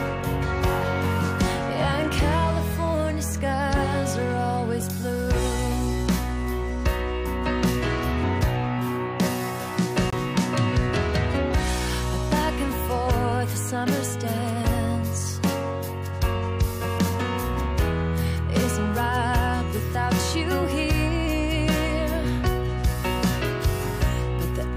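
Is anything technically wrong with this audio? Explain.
Yes. At 10.10 to 10.14 s there is a corrupt frame muted. Damaged compressed frames were rejected by the decoder and replaced with silence, leaving an abrupt 42 ms hole that fits three short frames. Timing is unaffected. The waveform drops to a flat line, and the spectrogram shows a blank vertical band across all frequencies.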